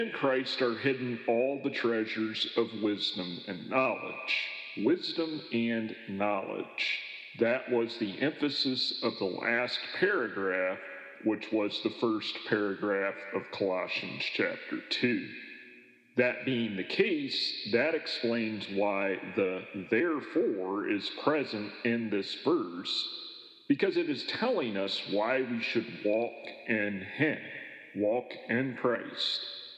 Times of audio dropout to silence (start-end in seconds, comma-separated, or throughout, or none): none